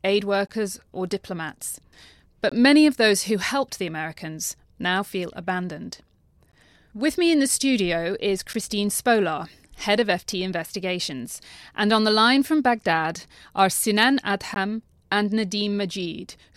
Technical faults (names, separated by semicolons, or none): gap between stream segments